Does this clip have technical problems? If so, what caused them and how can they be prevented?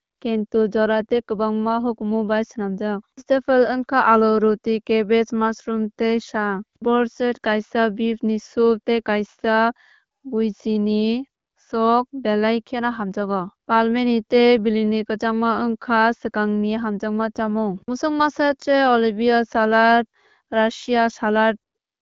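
No, the speech has no technical faults. It is carried by the AMR wideband (HD Voice) codec, with nothing above about 7.4 kHz and only light coding texture, which fits a rate of 12.65 kbit/s.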